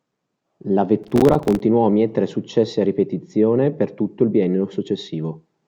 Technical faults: processor overload crackle

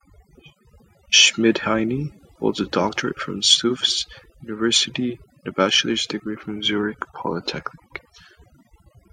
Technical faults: overdone noise removal

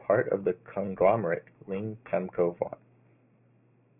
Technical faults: aliasing

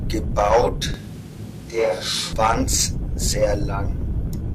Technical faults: switch to a distant microphone

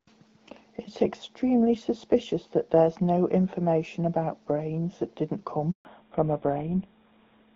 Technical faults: handover gap; fallback to narrowband

